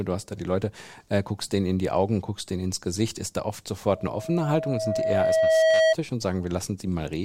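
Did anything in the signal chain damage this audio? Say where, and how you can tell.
Yes, an acoustic loop at the playback stage: loudspeaker feedback squeal from 3.93 to 5.95 s, a 643 Hz tone swelling over about two seconds to roughly 10 dB above the speech.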